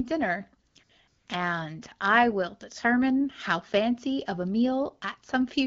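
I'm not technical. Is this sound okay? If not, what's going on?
No. The phone briefly decided no one was talking and stopped sending sound, so the receiving end filled the gaps with artificial hiss, called AMR comfort noise. This happens at 0.67–0.75, 0.83–0.89 and 1.07–1.27 seconds, just before "and I will determine". The background turns into smooth, steady noise that flicks on and off.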